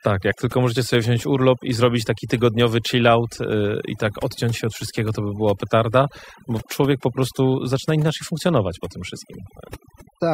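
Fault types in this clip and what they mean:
Overdone noise removal: Throughout this speech clip, a noise reduction stage set far too aggressively pulls individual frequency bands down whenever they sit close to its noise estimate. The low-level parts of the voice vanish along with the background noise. The gaps fall to near silence dotted with twinkling, tonal specks. Unlike a plain low-pass or band-limit, the loss shifts from moment to moment with signal level rather than cutting at one fixed frequency.
Damaged data in a compressed stream: At 0.32 s a corrupted stretch of the encoded stream makes the decoder misread or drop a frame and hunt for the next valid header. The result is a brief glitch lasting under 20 ms.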